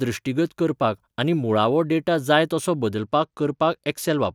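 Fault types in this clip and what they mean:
Bluetooth SBC bit pool drop: a congested link forced the encoder to a much smaller bit budget, starving the top sub-bands and coarsening the rest. After "डेटा जाय तसो", from 2.98 s to the end, the speech turns dull and gritty, consistent with a bit pool falling from 28 to 13.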